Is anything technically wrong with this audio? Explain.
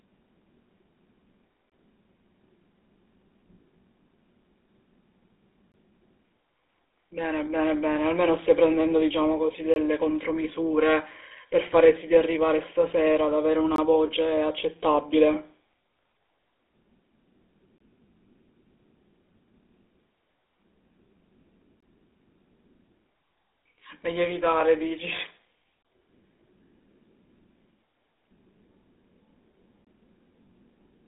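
Yes, there are three kinds of problem here.

The whole clip has the GSM full-rate codec sound. The speech is squeezed through a vocal-tract model driven by coarse pulse excitation, which fits the 13 kbps full-rate coder. Nothing gets through above about 3.8 kHz, and there's a plainly audible buzzy, gravelly roughness.

There's also a gap between chunks every 4 seconds, at 1.70, 5.72, 9.74, 13.76, 17.78, 21.80, 25.83 and 29.85 s. The audio arrives in 4-second blocks with about 21 ms of silence left at each join, so you hear a short, hard-edged hole at a steady rhythm.

At 15.35 s there's a repeated buffer. A 10 ms piece was played two extra times because fresh audio didn't arrive in time. That's a buffer too small to give a real stutter, so it comes across as a brief buzz or click with hard joins.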